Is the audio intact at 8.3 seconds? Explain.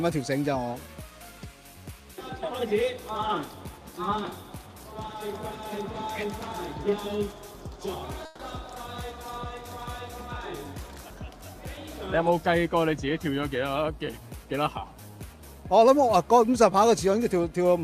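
No. A burst of packet loss from 8.25 to 8.41 s is concealed by extending and fading the preceding sound; about 140 ms of audio is missing.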